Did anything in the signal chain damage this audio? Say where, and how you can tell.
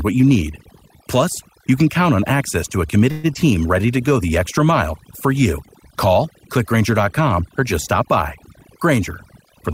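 Yes. Call processing applied overdone noise removal across the whole clip. The background drops and breaks up into twinkling specks. On a spectrogram, the noise floor shows as isolated flickering dots, with weak harmonics carved away between louder bands.

A call audio freeze follows "on access to a", from 3.11 to 3.26 s. The last sound carries on as a fading buzz or hiss for about 123 ms, and then speech resumes where it stopped. The likely cause is late packets emptying the jitter buffer. The waveform shows a decaying, repetitive tail.

A skip ahead occurs around 3.34 to 3.37 s, with only a tiny fill of about 11 ms. Roughly 70 ms of speech is gone, and the two sides are spliced almost directly. This is a network or buffer-overflow drop, and it shows as an abrupt waveform discontinuity.

A jitter buffer slow-down runs from 3.81 to 4.27 s, just before "extra mile for you". Speech plays at about 88% speed with the pitch unchanged, because repeated pitch periods add 61 ms. 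It sounds drawn out. The waveform shows near-identical cycles repeated back to back.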